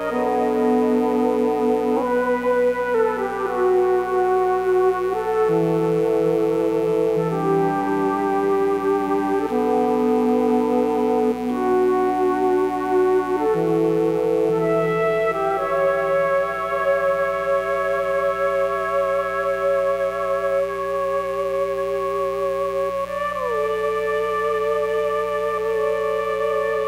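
From start to finish a mains buzz sits roughly 20 dB below the audio: sharp switching spikes on the 60 Hz supply spray harmonics up into the kilohertz range, giving a steady, raspy edge rather than the smooth low drone of plain hum.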